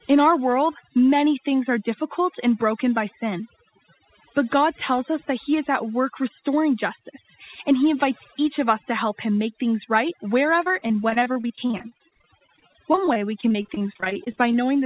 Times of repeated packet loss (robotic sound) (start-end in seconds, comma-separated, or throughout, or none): 10.64-14.63